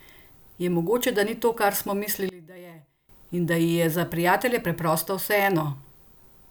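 Speech clip where, from 2.29 to 3.09 s, the sound drops by about 20 dB to a faint residue, likely one channel inverted cancelling in mono; the waveform visibly shrinks and the spectrogram dims across the band.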